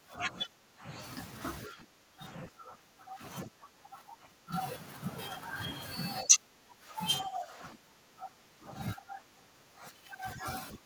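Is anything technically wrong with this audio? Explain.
Yes. The speech shows speech suppressed in double talk, plus a brief leak of the other side's voice.

Speech suppressed in double talk at 0.0–0.91, 1.68–3.22, 3.45–4.53, 6.22–6.98, 7.23–8.72, 8.95–10.46 and 10.72 s to the end: level dips by roughly 15 to 20 dB, likely an echo canceller attenuating the talker while both sides spoke.

The other side's voice is leaking through at 3.44–3.49 s: a short scrap roughly 15 dB below the speech, likely far-end loudspeaker sound the echo canceller left in the microphone signal.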